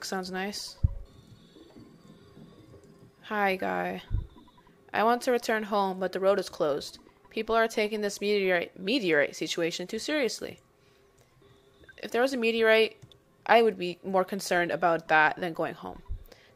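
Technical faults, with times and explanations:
Nothing here catches the ear as a technical fault at any point in the clip, so there's nothing to list.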